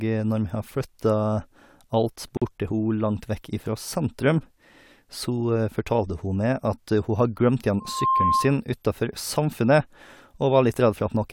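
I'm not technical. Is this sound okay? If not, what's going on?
No. At 2.37 to 2.42 s there's a gap at a join of encoded pieces: about 46 ms of silence cuts into the speech, then it carries on exactly where it stopped. Nothing is lost, unlike a dropout. Two separately encoded sections were joined without removing the short silent padding each encoding adds.

Right after "glemt igjen", from 7.8 to 8.58 s, comes a loudspeaker feedback squeal. A single 1.1 kHz tone swells over roughly a third of a second and ends up louder than the speech. Unlike a steady added whistle, it grows by itself because a microphone is picking up the loudspeaker it feeds.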